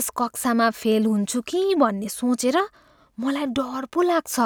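At 2.26 s a bit error spike gives one sharp, broadband tick, about -36 dBFS: a single sample leapt by a power of two and returned. Unlike a dropout click, there is no gap or lost audio around it, just one isolated sample.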